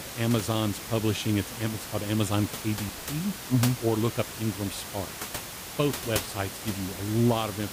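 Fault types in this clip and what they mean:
No technical faults are present.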